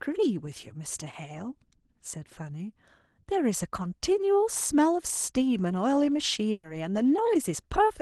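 At 6.51 to 6.66 s, a burst of packet loss drops about 120 ms. Concealment stretches the last sound into a fading buzz or hiss, then playback resumes further on.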